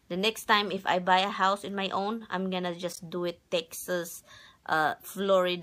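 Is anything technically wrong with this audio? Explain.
Yes. Corrupt frames were decoded at 0.77–0.79 s and 2.90–2.99 s. Damaged compressed data was played anyway, misplacing energy in frequency, producing brief blips around −30 dBFS.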